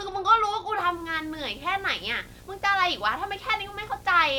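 From 0.80 s to the end of the clip, a screen or video cable is coupling its signal into the audio path, causing a video or display buzz. The interference arrives at the picture's 60 Hz field rate, so the speech sits over a steady 60 Hz buzz with a gritty hash of higher harmonics riding on top. It stays roughly 25 dB below the speech, constant underneath it.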